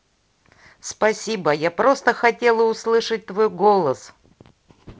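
No technical faults can be heard in this speech clip. It carries the sound of G.722 wideband telephone coding, with speech reaching up to about 7 kHz, a faint hiss in the upper band and a slight added grain in the lower band that fits the 48 kbit/s mode.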